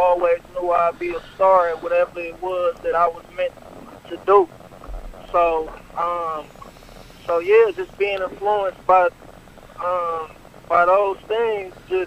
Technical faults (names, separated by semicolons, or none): none